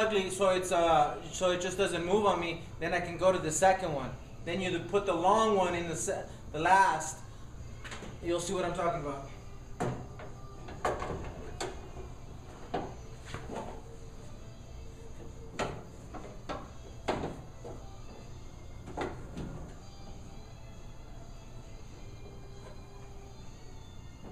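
Nothing goes wrong anywhere in this one; there's no glitch, dropout or other technical fault to point to at any moment.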